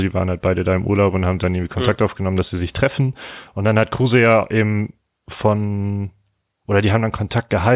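No technical faults can be heard anywhere in the speech.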